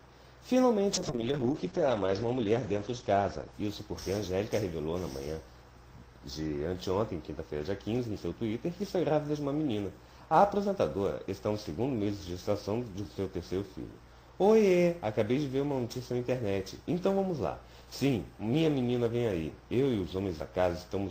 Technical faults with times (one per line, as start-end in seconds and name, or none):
0.93-5.37 call bitrate drop